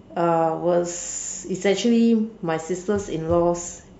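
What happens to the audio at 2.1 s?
Likely MP3 compression throughout, fitting a low bitrate near 64 kbps: weak frequency lines flicker on and off, so speech at 2.1 s sounds watery.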